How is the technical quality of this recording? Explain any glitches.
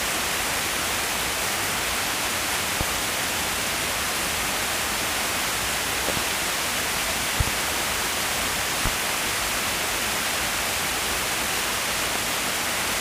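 The recording has one recurring problem, loud pops, five times. Single pops land at 2.81–2.84, 8.86–8.89 and 12.16–12.19 s, and double pops at 6.09–6.20 and 7.40–7.51 s. Each stands roughly 15 dB above the surrounding sound, which keeps going underneath. The likely cause is a sudden voltage spike from something like a plug, a switch, static or a driver hiccup, which the downstream circuitry turns into a sharp, brief thump.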